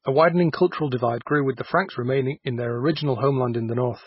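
MP3 compression damage runs through the whole speech clip: the treble stops dead at about 5.5 kHz, and heavy watery, swirling artefacts follow as weak frequency lines drop in and out between frames, likely from an MP3 encoder starved of bits at a rate fitting roughly 16 kbps.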